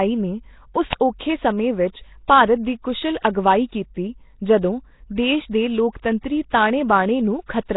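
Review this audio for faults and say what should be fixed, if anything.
Throughout, the speech is heavily coded, with a rough, hissy halo, a smeared underwater quality and nothing above 3.9 kHz, which fits Nellymoser compression at around 16 kbps as the likely cause. Unlike MP3 artefacts, the noise fills whole bands. Record or transcode with a modern codec such as Opus at a higher bitrate.

At 0.93 s, a single crack lasting about 2.9 ms comes from an uninitialised buffer, where leftover memory was played as samples, which fits a 128-sample buffer. Unlike a dropout, it adds noise rather than silence. Zero-fill buffers before playback.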